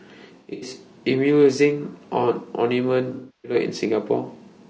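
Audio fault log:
throughout  low-delay AAC compression: the speech sounds rough and grainy, with noise filling the gaps between pitch harmonics and a thin, synthetic top band. This is likely AAC-ELD at a bitrate around 32 kbps, where short frames resolve harmonics poorly and the bit budget runs short.
0.38–0.71 s and 3.14–3.55 s  AAC frame loss with concealment: in the first span, about 180 ms of audio drops out in patches scattered over roughly 240 ms, the longest gap lasting about a tenth of a second, so it sounds smeared and phasey. In the second, 300 ms is rebuilt from the last good spectrum, decaying toward silence before fading back in.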